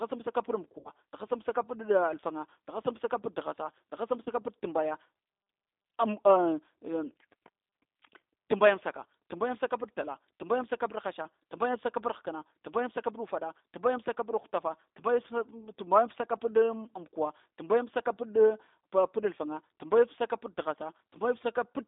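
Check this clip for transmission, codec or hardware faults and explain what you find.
Two faults are audible in this speech clip: plainly audible low-bitrate codec damage throughout, and two brief dropouts masked by the decoder.

Throughout, the speech sounds rough, thin and faintly synthetic, confined to a telephone band of roughly 250 Hz to 3.7 kHz. This is the G.729 codec at 8 kbit/s: the decoder rebuilds each 10 ms frame from a vocal tract filter, a pitch predictor and a few pulses, discarding fine detail and everything above the band.

At 0.79 to 0.90 s, and again at 4.23 to 4.30 s, the speech smears into a buzzy tone or coloured noise that fades, before recovering weakly. This is VoIP packet loss concealed by the speech codec. About 60 ms went missing in the first gap and 30 ms in the second, which fits two lost packets and then one. The decoder filled each hole by extending its last pitch and filter at falling gain, and because every frame builds on the previous one, the sound stays weakened briefly after audio resumes.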